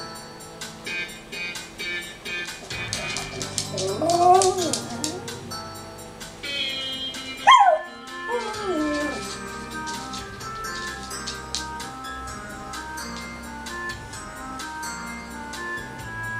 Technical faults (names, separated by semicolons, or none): none